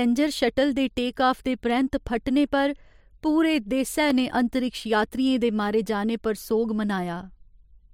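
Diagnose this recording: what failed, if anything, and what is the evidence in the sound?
An electrical switching spike, most likely a nearby switch or motor arcing into the analogue wiring, entered the line once. At 4.10 s a single sharp snap, only about 2 ms long, sits on top of the speech, added to the signal rather than interrupting it.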